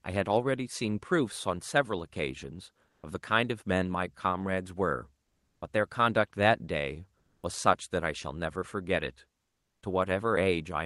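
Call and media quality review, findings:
Comfort noise in place of the background during speech pauses: 2.89–3.03 s (140 ms), 5.23–5.61 s (380 ms), 7.19–7.43 s (240 ms). Real background, about 46–54 dB below peaks, swapped for flat, featureless noise; level shifts about 4, 3 and 0 dB. Likely Opus DTX: sender halts frames on silence, receiver synthesizes shaped noise. Call path audible as top end ending near 12 kHz, consistent with Opus at roughly 40 kbps.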